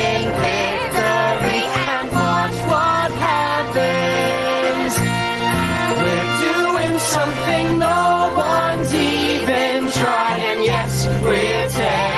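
Gain pumping throughout: the input gain is likely set too high, and a fast limiter clamps each loud sound, so the gain swings about 10 dB.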